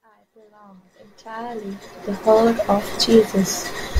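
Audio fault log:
No faults found; the speech fades in smoothly from the opening to full level by 2.4 s, with no click or hard edge.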